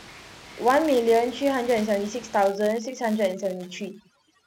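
From the start, a filter is restarted on every block, clearing its state each time, so a buzz near 172 Hz, consistent with 256-sample blocks, tracks the speech level. From 2.47 s to the end, overdone noise removal gates frequency bands near its noise estimate, turning room noise, about 18 dB below speech, into twinkling near-silence.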